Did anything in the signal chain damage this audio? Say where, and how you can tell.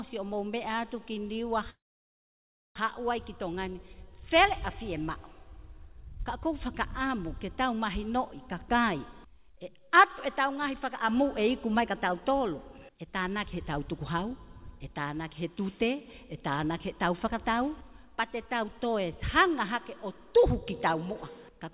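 Yes. Network stage: from 1.7 to 2.79 s there is a long network dropout, most likely from packets that never arrived. The last sound is stretched into a fading buzz for about a tenth of a second, then close to a second of near silence. Audio resumes with that stretch gone rather than delayed. A brief glitch would conceal for tens of milliseconds and recover. Here the concealment runs out and the content never returns.

Jitter buffer stage: between 3.37 and 3.95 s a jitter buffer speed-up plays the audio about 9 percent fast. It trims roughly 50 ms in short pitch-period pieces to drain the excess delay left after the dropout. Pitch holds steady while the pacing hurries, which separates it from a clock or resampling error, where pitch would shift too. The call path itself sounds like a G.711 link, with nothing above 4 kHz.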